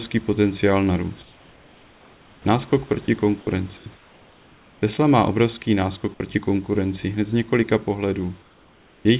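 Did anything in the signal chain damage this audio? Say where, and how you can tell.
Yes. Comfort noise in place of the background appears at 1.22–2.45 s, 3.77–3.86 s, 3.95–4.82 s and 8.42–9.05 s. In those pauses the room tone turns steady and featureless, about 3 to 4 dB quieter. The call processing likely stopped sending during silence and synthesised noise instead.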